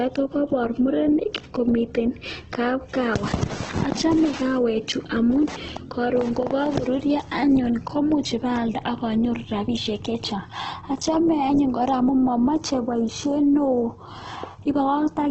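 From start to finish the speech sounds grainy and rough, with a noisy, hissing texture where clean tone should be, and nothing is heard above about 8.2 kHz, leaving the top dull and narrow. This is likely Opus compression at a very low rate, consistent with around 12 kbps in its music-oriented CELT mode. Short of bits, the encoder keeps each band's energy but fills its detail with noise or copied lower bands, which produces that gritty character, and it narrows the bandwidth to wideband.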